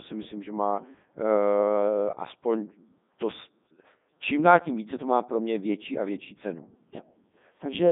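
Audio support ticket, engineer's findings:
Robotic, buzzy speech for the whole clip, band-limited to roughly 150 Hz to 3.7 kHz, nothing above 3.8 kHz. Looks like a Codec 2 vocoder, heavy damage, fitting its top 3.2 kbit/s mode. Voice rebuilt from sine waves off pitch and envelope, so the original waveform is gone.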